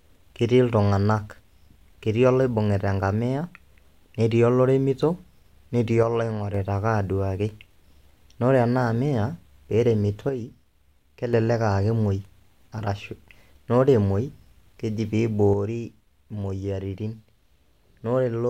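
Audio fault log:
6.03–6.54 s, 10.29–11.33 s and 15.53 s to the end: one channel drops out. The speech falls abruptly by about 6 dB and recovers at each boundary except the last, which never returns. This is likely a lost stereo channel, halving the shared content in the mono sum.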